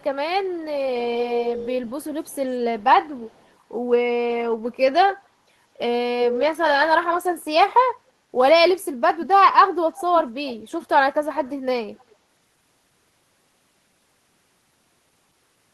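Echo leak returns delayed copies of the speech. At 0.0–0.6 s and 1.21–3.52 s the copy trails by 190 ms, faint, then clearer. At 5.1–5.28 s and 6.2–6.42 s it trails by 225 ms, nearly as loud at 6.2 s. At 9.92–12.15 s it trails by 286 ms. A far-end echo canceller likely missed it.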